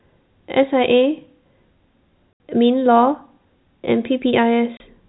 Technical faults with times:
2.33-2.40 packet loss filled with silence
4.77-4.80 packet loss filled with silence

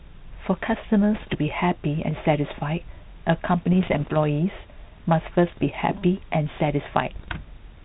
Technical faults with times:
1.14-1.37 bit errors on an ADPCM link
3.73-4.16 bit errors on an ADPCM link
5.47-5.71 bit errors on an ADPCM link
7.16-7.29 bit errors on an ADPCM link

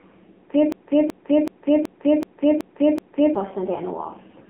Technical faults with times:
0.00-4.49 AMR narrowband mobile codec
0.72-3.35 broken-record loop

